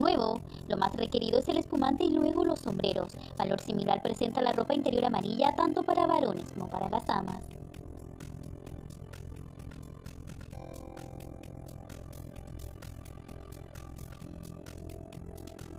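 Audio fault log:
Throughout, overlap-add ripple: the audio was rebuilt from windowed frames whose overlap fails to sum to a steady gain, so the level dips and recovers once per frame, around 40 times a second, with swings of about 60 dB. That deep, fast modulation is heard as a harsh robotic flutter. On a waveform the envelope looks chopped into regular pulses; a spectrogram shows evenly spaced vertical stripes across all frequencies.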